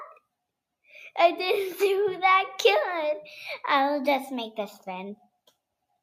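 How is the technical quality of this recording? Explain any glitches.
The technical quality of this recording is good, and there are no glitches to explain.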